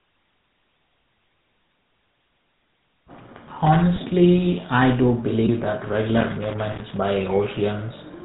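From start to finish the speech has been through the GSM full-rate codec. This early mobile codec models the vocal tract and drives it with a sparse train of regular pulses, discarding most of the excitation detail. The damage is plainly audible. Voices take on a buzzy, gravelly roughness. Nothing survives above 4 kHz, so the sound is dull and narrow. The coarse quality fits the 13 kbps full-rate coder.

At 3.96 s, lasting until about 3.99 s, there is a lost GSM frame. The length fits a single 20 ms frame. The decoder had no valid data for this stretch. It reused the parameters of the last good frame. The result is a brief rough, metallic ring where the speech should move on. The gap is short, so the sound never fades to silence before normal decoding resumes.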